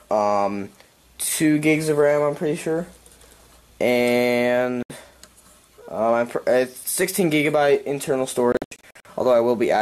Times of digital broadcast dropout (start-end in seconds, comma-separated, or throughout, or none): 4.83-4.90, 8.52-9.06